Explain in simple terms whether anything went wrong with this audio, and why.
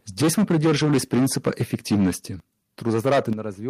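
The microphone was likely set too loud, causing microphone overload from 0.2 to 2.11 s and again from 2.86 to 3.33 s. The loudest moments hit the converter's limit and get their tops sliced off, so the speech sounds harsh and crackly there.

The microphone volume was stepped down, likely by the call software reacting to that overload, at 0.22 s and again at 3.33 s. Each time the speech and background suddenly get quieter, slightly at first and much more sharply the second time.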